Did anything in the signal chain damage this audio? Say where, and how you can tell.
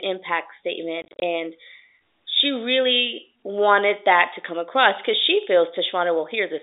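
Yes, at the network stage. Between 1.02 and 1.22 s the speech is chopped by a cluster of dropouts: about 130 ms of silence scattered across that 200 ms stretch, with no single hole longer than 30 ms. Each gap starts and stops abruptly. That's packet loss filled with silence, where the receiver plays nothing in place of each missing packet. The gap sizes point to roughly 10 ms packets. The G.711 telephone band around it sounds intact.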